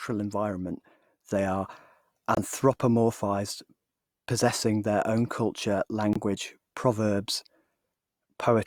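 At 2.35 s (42 ms) and 6.13 s (40 ms), corrupt frame muted: damaged compressed frames were rejected and replaced with silence, leaving abrupt gaps that show as flat waveform and blank vertical spectrogram strips.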